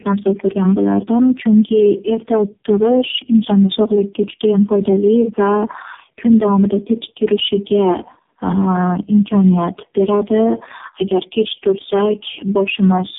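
Tandem speech coding throughout: the speech passes through three low-rate codecs in turn, consistent with AMR-NB, compounding into rough, muffled, warbly sound cut off at 3.7 kHz.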